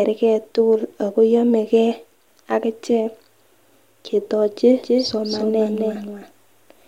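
From 4.76 s to the end of the speech, a doubled audio track appears. A second full-band copy trails by roughly a third of a second, a few dB quieter. It starts abruptly, with no decay or room colour. It likely comes from a slower second capture path.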